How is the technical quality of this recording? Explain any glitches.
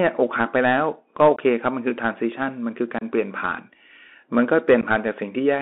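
The recording has clear technical damage: narrowband, gritty speech from a Bluetooth headset link, plus three brief dropouts.

Throughout the clip, the Bluetooth CVSD headset codec limits the speech to roughly 250 Hz to 3.5 kHz, with a granular hiss and rough, scratchy sibilants. That fits a 64 kbit/s CVSD link. It encodes one bit per sample as a step up or down, so fast, loud high-frequency detail outruns the adapting step and distorts. On a spectrogram, energy stops sharply near 3.5 kHz, with a noisy floor beneath the speech.

Unconcealed Bluetooth headset packet loss occurs three times: 1.36–1.39 s, 2.99–3.03 s and 4.81–4.84 s. Each time, about 15 to 26 ms of audio is lost, amounting to several short voice packets. The gaps were not filled in, so the speech simply cuts out, with abrupt edges that can click, and it returns briefly quieter as the codec's step size rebuilds. A waveform shows flat or near-flat notches, and a spectrogram shows thin vertical gaps.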